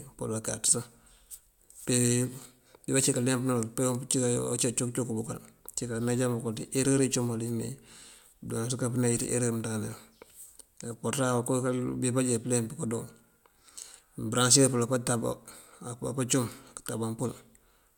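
No technical faults can be heard anywhere in the speech recording.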